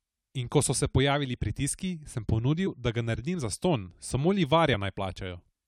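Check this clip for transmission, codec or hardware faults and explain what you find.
Two brief dropouts of compressed frames were skipped, both in the speech.

At 2.66 to 2.68 s, between "se pojavili pritiski sem" and "da ga", and at 4.73 to 4.75 s, right after "zastonj samo", the decoder skips about one frame, roughly 20 ms, which fits a frame of about 23 ms. At each join the speech jumps ahead by that missing stretch. A spectrogram shows a thin vertical seam where the harmonics jump forward.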